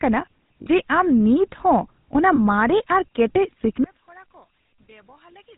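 Throughout the speech there is a buzzy, gravelly roughness with nothing heard above 4 kHz, and the sibilants sound dull and grainy. This is the GSM full-rate codec, whose character fits a 13 kbps stream. It rebuilds the voice from a vocal-tract model driven by a coarse, regularly spaced pulse excitation, and that thin excitation produces the grit. The codec damage is plainly audible here.

From 0.62 to 0.66 s the sound briefly freezes into a rough, metallic ring, and a shorter ring of the same kind follows from 2.36 to 2.39 s. These are lost GSM frames. The decoder fills each gap by repeating the settings of the last good frame. The 40 ms gap fits two missing 20 ms frames and the later one fits a single frame, so both are too short to fade fully to silence.

From 3.84 s to the end the speech collapses by about 31 dB. What remains is only a faint trace. This is likely one channel inverted. 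With one stereo channel's polarity reversed, the centred voice is common to both sides and cancels when they are summed to mono. Only the small difference between the channels is left.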